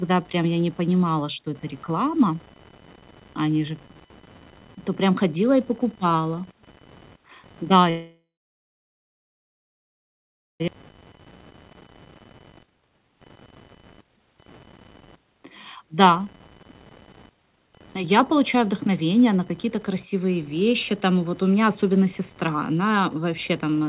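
Computer activity noise runs throughout the speech, a buzzing and chirping pattern pulsing at roughly 1 kHz and sitting about 25 dB below the signal. It comes from the computer's load changes, from the processor, graphics card or mouse, shifting the ground shared with the audio circuit. Because it follows that activity and not the talking, it keeps crackling through pauses. It lies within the narrow band that stops near 4 kHz, which fits a G.711 mu-law call path.

A call audio freeze runs from 7.9 to 10.62 s. The last sound carries on briefly as a fading buzz, then about 2.3 s of silence follows before the speech resumes where it stopped. The likely cause is packets held up in transit until the jitter buffer ran dry. Roughly 2.7 s of gap was inserted, and nothing was lost. The delay it adds sets up what comes next.

A skip ahead follows at 10.68 to 10.70 s. Playback jumps forward almost without a gap, and roughly 1.5 s of speech is dropped. 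The audio on either side of the jump is butted together directly, so the sentence lurches with a chunk missing.

Jitter buffer speed-up happens three times. From 12.54 to 15.40 s the speech runs at 132%, and roughly a second is removed. From 15.83 to 16.50 s it runs at 105%, and from 17.07 to 18.89 s at 106%. In each case the receiver trimmed short pitch-period slices over and over to shrink an overfull buffer. The pitch stays the same while the pace rushes, most clearly in the first stretch.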